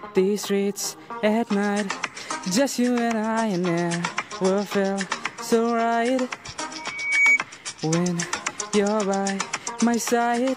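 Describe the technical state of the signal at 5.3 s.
At 5.3 s the signal is intact, with no audible fault at that moment.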